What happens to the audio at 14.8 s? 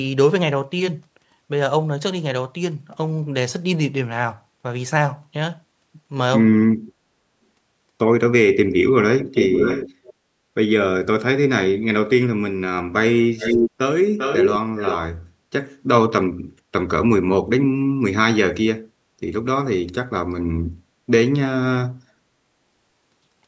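From 14.78 to 15.05 s there is an echo leak: a second, delayed copy of the speech arrives roughly 397 ms after the original and sits only a few decibels below it, so the two overlap audibly for that quarter-second. The likely cause is a far end on loudspeaker whose echo canceller failed to fully suppress what its microphone picked up, letting that residue travel back down the call.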